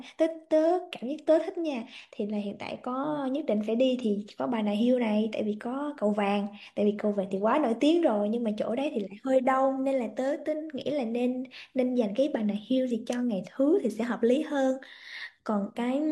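Speech recording with no technical faults to report.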